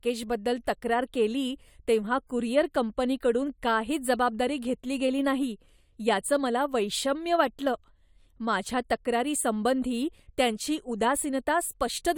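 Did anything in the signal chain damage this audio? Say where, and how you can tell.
No, nothing in the chain audibly damaged this speech recording, and the signal holds steady level, continuity and timing across the whole clip.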